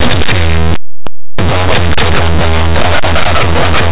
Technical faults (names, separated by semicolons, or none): linear audio read as companded